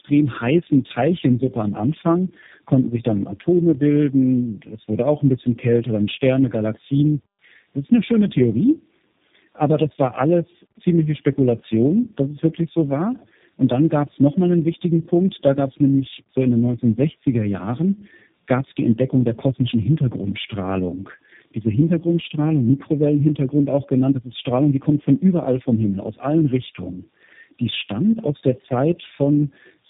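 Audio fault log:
throughout: tandem speech coding. The speech sounds as if it passed through three low-rate speech coders in a row, each re-encoding the last one's damaged output. Errors stack up, so it is rough, muffled and warbly. Nothing is heard above 3.7 kHz.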